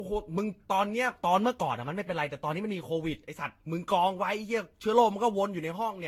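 From start to finish the speech has a swirly, hollow quality, with smeared consonant onsets and a watery, phasey texture in the upper range. This points to generation loss, likely from the audio being decoded and re-encoded around seven times with a Vorbis-type codec near 64 kbit/s. What separates it from a single low-bitrate encode is that the hollowness and blurring go beyond what that rate would cause alone, because each pass requantises on a shifted frame grid and the spectral gaps accumulate.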